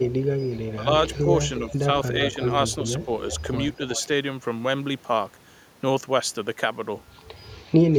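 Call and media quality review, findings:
Echo leak: delayed copy of the speech trailing the talker by about 0.37 s, at 0.41–0.58, 1.08–1.21, 2.24–3.38, 3.96–4.02 and 7.51–7.71 s. Strongest and longest at 2.24–3.38 s, about 10 dB under the speech. Roughly 15 to 20 dB down in the short scraps, about 35 dB down at 7.51 s. Likely far-end loudspeaker path with an acoustic echo canceller not fully cancelling mic pickup, residual returned at a steady ~365 ms round trip.

Speech suppressed in double talk: talker level dips sharply at 0.75–0.88 and 1.67–1.89 s, by roughly 15 dB, and more mildly at 2.30–2.38 s, inside the loud echo stretch. Each dip lasts roughly 0.07–0.2 s. Likely echo canceller or suppressor misreading overlapping speech as echo and attenuating the near-end talker along with it.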